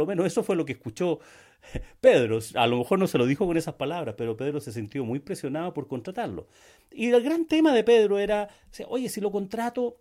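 No technical faults can be heard anywhere in the speech. There is nothing to place on the timeline and nothing to trace back to a cause.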